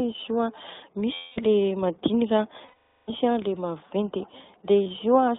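iLBC codec coding runs through the whole speech clip: a narrowband line from 200 Hz to 3.7 kHz, plainly rough and synthetic, consistent with the 15.2 kbps mode coding 20 ms frames independently.

Lost iLBC frames strike at 1.14 to 1.40 s (220 ms), 2.66 to 3.10 s (420 ms) and 4.84 to 4.87 s. Each time the decoder repeats the last pitch cycle mixed with noise, which sounds like a held, buzzy vowel that fades through the longer gap. Clarity returns almost immediately afterwards.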